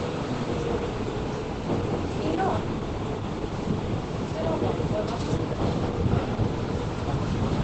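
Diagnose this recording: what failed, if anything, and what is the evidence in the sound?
Codec stage: the sound is muffled and hoarse throughout, with nothing above 8.7 kHz. This is likely Opus compression in speech mode near 12 kbps: hoarseness rather than MP3-style swirl.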